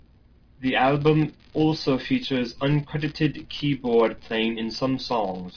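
No technical faults can be heard anywhere in the speech. There is nothing to place on a timeline.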